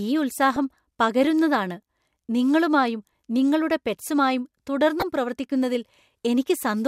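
DAB burbling appears at 0.54 to 0.60 s, then at 5.00 to 5.02 s, after "നിങ്ങളുമായും നിങ്ങളുടെ പെറ്റ്സുമായും". Bit errors slipped past error correction into the MP2 data. Wrong samples put short blips of noise in single sub-bands. The speech gets brief blips of noise, which fits several frames being hit.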